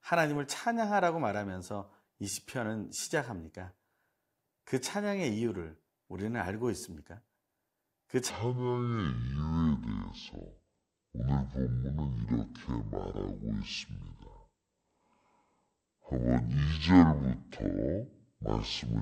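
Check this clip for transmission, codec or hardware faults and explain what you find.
One fault stands out: a section at the wrong speed. From 8.30 s to the end of the speech, playback runs at 0.55 times the original rate. The likely cause is audio being played or edited against the wrong clock. Speed and pitch are tied together, so both drop at once. The speech suddenly slows and deepens, falling about ten semitones. It sounds sluggish and drawn out, with a heavy, low tone.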